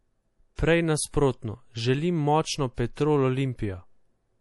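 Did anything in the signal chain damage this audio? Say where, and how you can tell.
Yes, and it's the codec stage. The whole clip has nothing above 11.5 kHz, a hard shelf rather than a gentle roll-off, and the damage is plainly audible: a watery, swirly texture on the speech, with sibilants going metallic. That's the likely signature of MP3 compression at a low bitrate, which fits something around 48 kbps. Short of bits, the encoder chops the top band off and drops weak frequency lines that flicker in and out between frames.

There's also pre-echo, still a codec artefact: a short hiss just ahead of sharp onsets at 0.56 to 0.59 s, smeared over about 30 ms, and at 2.74 to 2.78 s, over about 35 ms. Both attacks sound soft. The transform block spreads its quantisation noise across its full length, so noise sized for the loud attack leaks into the quiet stretch just before it.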